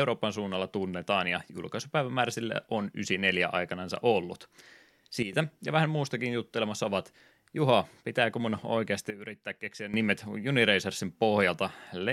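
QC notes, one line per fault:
5.22 to 5.33 s, sudden gain jump: the speech and the noise floor both drop about 10 dB at once, just before "ja vähän muustakin juttelemassa", likely a gain setting applied without a ramp.
9.10 to 9.94 s, sudden gain jump: right after "pitääkö mun oikeasti" everything falls about 12 dB together, same likely unramped gain change.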